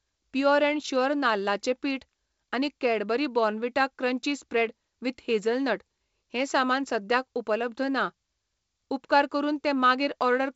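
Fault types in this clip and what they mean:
No faults can be heard in this speech clip.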